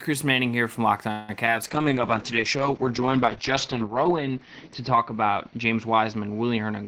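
At 1.11 s the speech stops moving forward and the last sound is drawn out as a fading buzz or hiss for about 170 ms, until 1.30 s, before resuming where it left off with nothing lost. This is a call audio freeze, likely caused by packets stalling in transit so that the jitter buffer emptied and the receiver stretched the final sound to fill the wait. The hold adds about 170 ms of delay to everything that follows.

Between 1.46 and 1.49 s there is a brief smear, a small wobble. This is short concealed packet loss. About 20 ms of audio never reached the decoder in time. The receiver covered part of the hole, around 9 ms, by extending the preceding sound, then blended back into the real signal.

From 1.64 s to the end the speech turns rough and watery, and its top end is dulled. This is a call bitrate drop. The encoder was pushed down from 32 to 8 kbps, forcing much coarser coding, and the audio bandwidth shrank from 20 kHz to 6 kHz, which removes the crisp high frequencies. 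The bitrate stays at its lowest for about 2.3 s, and the sound does not return to full quality before the clip ends.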